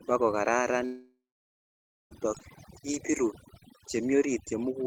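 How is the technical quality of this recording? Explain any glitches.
The recording has two clear problems: heavy-handed noise processing across the whole clip, and a long gap in the speech early on.

Overdone noise removal runs throughout. A noise reduction stage set far too aggressively cuts individual frequency bands whenever they sit close to its noise estimate, and it takes the quieter parts of the voice along with the hiss. As a result the background drops away and breaks up into twinkling specks.

From 0.85 s to 2.13 s there is a long network dropout, likely caused by audio failing to arrive for about 1.26 s. The receiver stretches the last bit of sound into a fill that fades out, then about 0.89 s of near silence follows before speech resumes. The part that fell into the gap is simply gone, so the speech jumps ahead when it returns.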